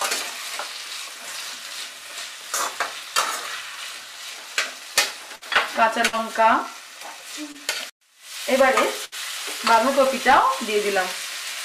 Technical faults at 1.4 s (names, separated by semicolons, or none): none